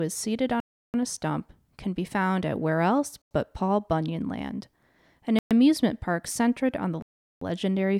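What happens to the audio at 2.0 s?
Nothing goes wrong at 2.0 s; the speech there plays through intact, with no dropout, click, distortion or other fault at that moment.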